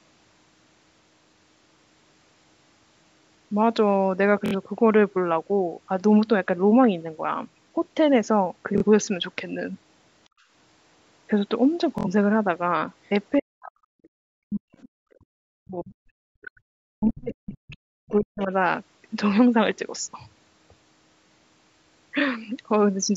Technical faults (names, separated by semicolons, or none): Bluetooth stutter; background gated by the echo canceller; speech suppressed in double talk; other side's voice leaking through